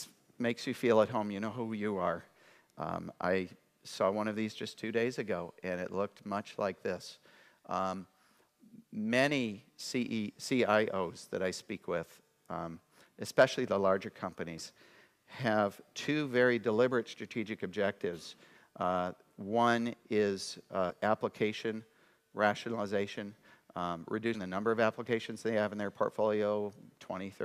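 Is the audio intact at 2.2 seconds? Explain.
Yes, the audio is intact at 2.2 seconds, with no fault present at that moment.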